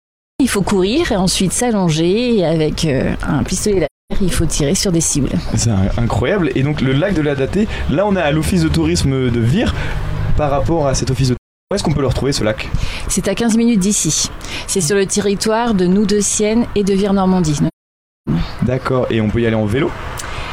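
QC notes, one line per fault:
0.0–0.40 s, cut-off start: capture began late, so the sound jumps in abruptly from digital silence at 0.40 s with no natural attack.
3.85–4.13 s, 11.37–11.72 s, 17.67–18.29 s, AAC frame loss with muting: lost frames were decoded as zeroed spectrum, leaving soft-edged holes of 256, 341 and 597 ms that fade out and back in.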